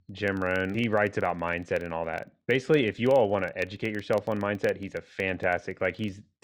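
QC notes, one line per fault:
Throughout: filter restarted on every block, so each block kicks off from silence with a little tick, giving a steady 21.5 Hz buzz under the speech that fits a 2048-sample block.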